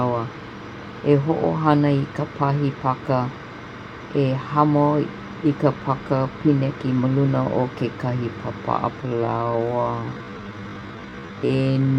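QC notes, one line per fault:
8.99–11.99 s, time-stretched section: right after "luna o kekahi pāpa'a" the speech abruptly slows to about 0.53 times its pace, roughly half speed, with pitch unchanged, and stays that way to the end. It drags, likely from software stretching the passage by repeating short pieces. On a spectrogram, harmonic spacing holds steady while syllables widen; the waveform shows drawn-out envelopes.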